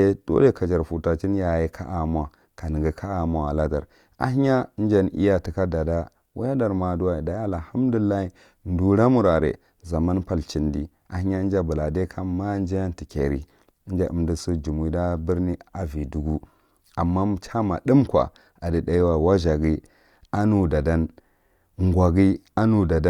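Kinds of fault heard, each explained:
No faults detected in this recording.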